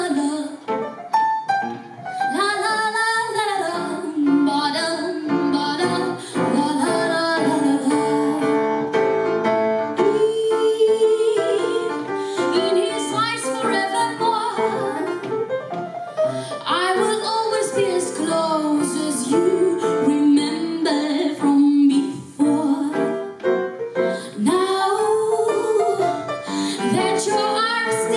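Nothing stood out as a technical problem on listening.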